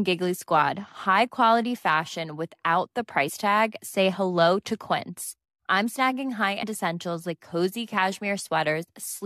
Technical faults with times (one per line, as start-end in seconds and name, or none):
3.28 compressed frames skipped
6.62 compressed frames skipped